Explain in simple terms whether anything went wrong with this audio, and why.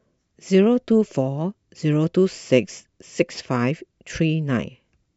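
Nothing went wrong here: listening to the speech, I didn't hear anything in the recording that stood out as a problem.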